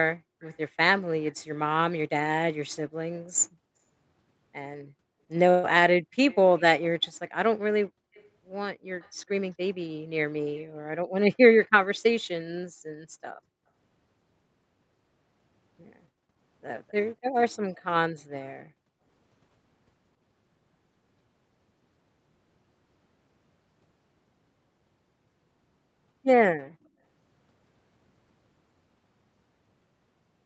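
At 0.16 to 0.41 s, background gated by the echo canceller: the canceller clamped the microphone hard while the far loudspeaker played, so the room tone drops by as much as about 40 dB. It happens again at 12.83 to 13.67 s, 16.09 to 16.26 s and 18.61 to 19.05 s, each dip lasting about 150 to 400 milliseconds before the background returns.

Between these, an echo leak is heard at 0.42 to 1.32 s, 6.3 to 9.28 s, 10.57 to 11.97 s and 16.88 to 18.45 s. It is likely residue the far end's echo canceller failed to remove: a faint copy of the speech trailing 256 ms behind, roughly 30 to 35 dB below it.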